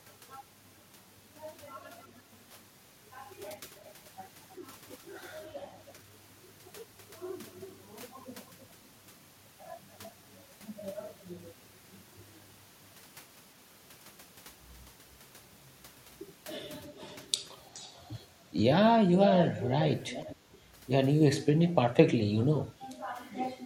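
Echo leak shows up five times: 1.77–2.21 s, 3.75–5.93 s and 7.08–8.66 s with the speech returning about 325 ms late, then 16.96–18.01 s and 19.2–20.36 s at about 420 ms. The copy starts very faint, gets a bit stronger, and in the last stretch is nearly as loud as the speech itself. It's likely a far-end speakerphone whose echo canceller let its own pickup slip back down the line.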